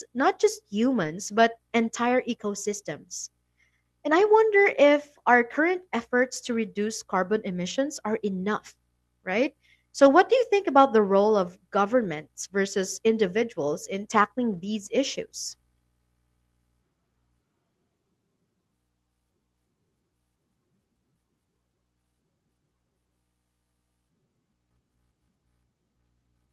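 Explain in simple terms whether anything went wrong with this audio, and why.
Lost packets were rebuilt from error correction: a few pieces of the speech went missing in transit, and the decoder filled each hole with a rougher backup copy carried in the next piece. Instead of silence you hear brief grainy, noisy patches at 1.03–1.05, 4.11–4.21, 7.65–7.71, 10.05–10.07, 12.03–12.05 and 14.53–14.67 seconds.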